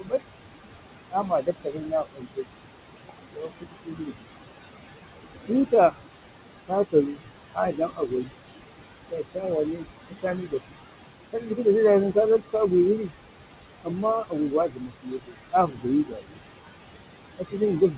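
Noise suppressor artifacts run through the whole clip: steady room noise is pulled down by about 21 dB between phrases and returns under speech, seen as gated, blotchy background on a spectrogram. From 0.0 to 4.27 s, speech cut by the noise suppressor swallows softer consonants and endings, about two seconds in total, with drops of about 22 dB that show as dented waveform envelopes. From 5.47 s to the end, the same cutting of quiet speech returns, with drops of about 21 dB that leave faded, thinned speech bands.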